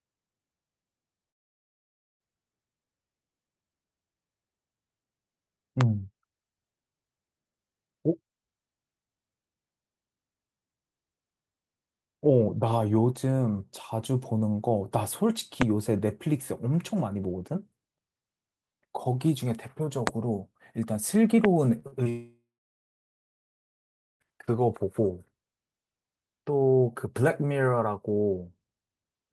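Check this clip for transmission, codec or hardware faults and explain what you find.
The clip has three kinds of fault: two long dropouts, four loud pops and a short burst of concealed packet loss.

Long network dropout, 1.29–2.21 s and 22.09–24.22 s: audio likely stopped arriving, the last sound fades to near silence, and the waveform shows a flat gap, about 1.8 s long in the second case.

Loud pop at 5.81, 15.62, 20.07 and 21.45 s: a likely electrical step adds a sharp click roughly 20 to 25 dB above the speech, a thin vertical spike in the waveform and a full-band stripe on a spectrogram.

Short concealed packet loss at 21.79, 21.87 and 22.04 s: brief gaps of 20 to 40 ms are filled with extrapolated sound, heard as smears or wobbles, and they appear on a spectrogram as blurred, smoothed slivers just before the second dropout.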